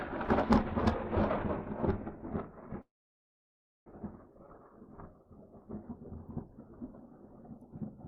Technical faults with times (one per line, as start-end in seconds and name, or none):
2.81-3.88 call audio freeze